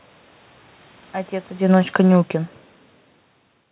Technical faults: automatic gain falling

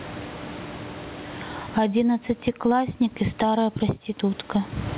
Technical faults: gain pumping

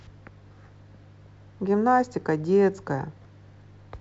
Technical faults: none

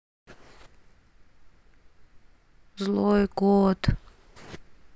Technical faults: none

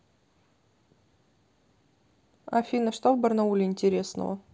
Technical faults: none

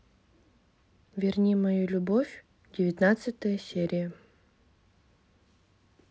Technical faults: none

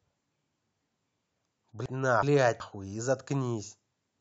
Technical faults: chunks out of order

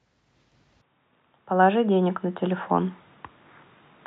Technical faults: input switched to a poorer device

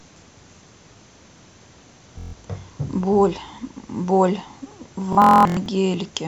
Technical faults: Bluetooth stutter

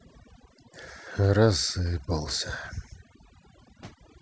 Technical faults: overdone noise removal

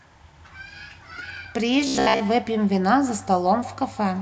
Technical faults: feedback echo between two devices; robotic sound from repeated short buffers

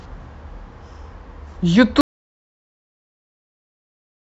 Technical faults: audio dropout to silence

